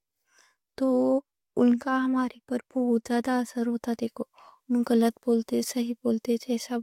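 No technical faults can be heard in this speech clip.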